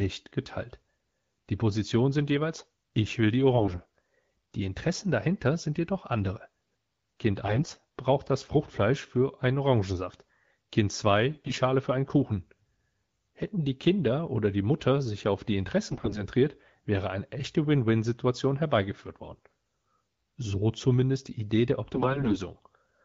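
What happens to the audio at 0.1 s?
Nothing goes wrong at 0.1 s; the speech there is intact, carried cleanly by the AMR wideband (HD Voice) codec at 12.65 kbit/s.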